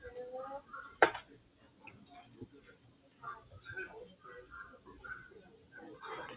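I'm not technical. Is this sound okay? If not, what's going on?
No. A noise suppressor meant for speech was left running on these sounds, so the level keeps swelling and sinking. Unlike a loose connection, the sharp starts mostly come through.

There are three spots of sound cut by the noise suppressor: 1.4 to 1.84 s, 2.24 to 3.23 s, and 5.45 to 5.73 s. Lingering sounds dip or fade early rather than dropping out completely.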